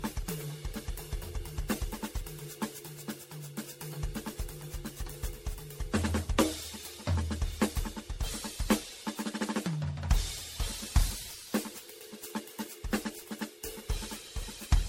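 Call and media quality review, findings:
Generation loss across the whole music track: swirly, smeared, hollow tone with blurred attacks and nothing above 16.5 kHz. Artefacts sound heavier than one low-rate encode would explain. Likely repeated lossy re-encoding, roughly ten passes, fitting a 64 kbit/s MP3 chain, each pass requantising on a shifted frame grid so the noise and spectral holes stack up.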